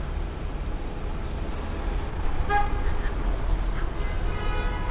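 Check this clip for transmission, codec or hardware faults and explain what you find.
Two faults are audible in these everyday sounds, carried over a call path whose band stops at 4 kHz, which fits G.711 mu-law at 64 kbps.

At 1.52 to 1.54 s there is a skip ahead. About a second of audio was dropped, either in transit or by an overflowing jitter buffer while later audio was already queued. Playback jumps forward with no fill, and the two sides are butted together.

From 1.55 s to 4.89 s there is a jitter buffer speed-up. The buffer held excess audio and trimmed it by repeatedly removing short pitch-period pieces, roughly a third of a second in total. The sound runs about 9% fast at unchanged pitch and feels hurried.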